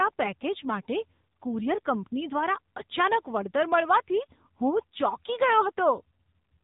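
Speech, passed through an AMR narrowband mobile codec for its whole length. Nothing above about 3.8 kHz survives, so the sound is thin and muffled. The codec damage is plainly audible: a buzzy, synthetic edge that fits a low rate of about 8 kbps.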